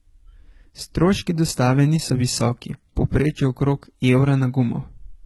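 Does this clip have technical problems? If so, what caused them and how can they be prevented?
Yes. Throughout the speech, s sounds come out gritty and lispy and the treble has a metallic, synthetic sheen. This is likely HE-AAC compression: only the lower spectrum is coded, and the upper bands are rebuilt by copying lower ones upward, so high harmonics misalign. The heavy damage fits a very low bitrate around 16 kbps. To prevent it, encode at a higher bitrate or use a full-band codec.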